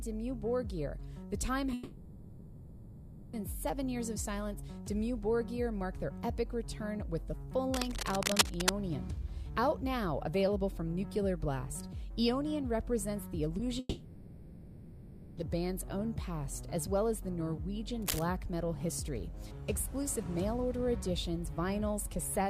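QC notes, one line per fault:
1.73–3.35 s and 13.79–15.39 s, long network dropout: Each time, about 1.6 s of audio goes missing. The receiver fills the gap by stretching the last sound into a fading buzz or hiss. Then the audio picks up again further along, with that stretch simply gone. The likely cause is packets not arriving for over a second, with the receiver's concealment covering the hole.
7.74–8.71 s and 18.02–18.24 s, cable scratch noise: Dense, uneven bursts of scratchy rustle sit on top of the sound. The first run lasts nearly a second and is about as loud as the sound itself. The second is a short flick of about 0.2 s, a little quieter. This is likely a worn cable, connector or control being moved, so the contact resistance jumps around and throws noise into the signal.
13.57–13.61 s, short concealed packet loss: About 20 ms never reached the decoder in time. The receiver patched it by carrying the previous sound forward and blending back into the real audio, so you get a brief smear or wobble rather than a hard gap. 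It sits just ahead of the long dropout at 13.79 s, so the two run close together.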